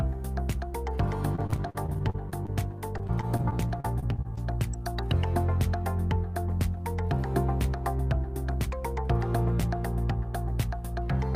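Choppy, robotic sound with pieces missing runs from 1.35 to 2.50 s and again from 2.98 to 4.39 s: repeated packet loss (robotic sound). Each stretch holds about a dozen dropouts, the longest 45 ms and 33 ms, each patched by stretching the last sound before the next arrives.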